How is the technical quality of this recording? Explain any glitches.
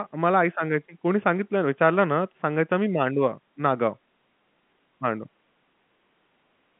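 No glitches can be heard: the speech carries the narrow band of a G.711 telephone line, roughly 150 Hz to 3.4 kHz with nothing above about 3.7 kHz, and any damage from that telephone coding is at most faint.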